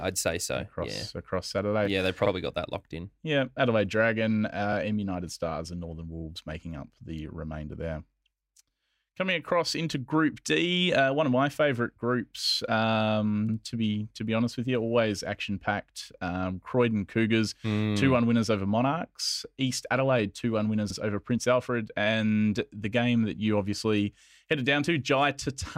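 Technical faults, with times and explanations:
13.48 to 13.55 s, repeated frames: a brief stutter just before "to be to be", where a 72 ms stretch of the speech plays a second time. A run of compressed frames, likely about three, was written or sent twice, so the decoder repeated that audio and the clip grew 72 ms longer.
20.89 to 20.94 s, repeated frames: a shorter stutter right after "two one", with a 48 ms block heard twice. This fits roughly two duplicated frames decoded again, adding 48 ms.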